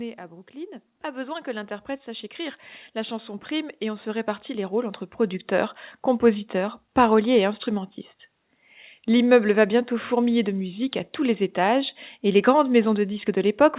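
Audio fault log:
0.52–5.86 s: automatic gain rising. Finding the input too quiet, the automatic gain control raised its gain gradually by about 18 dB over some five seconds, so speech and background noise swell together, levelling off just before "compositeurs paroliers et instrumentistes".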